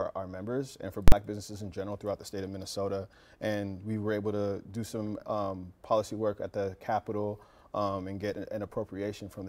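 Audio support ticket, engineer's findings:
Invalid numbers at full scale, 1.08 to 1.12 s: one loud bang. Output pinned at one extreme value for about 43 ms, which fits a 2048-sample processing block at 48 kHz. Probable component: a DSP stage producing infinite or invalid values, clamped to full positive or negative scale for the whole block.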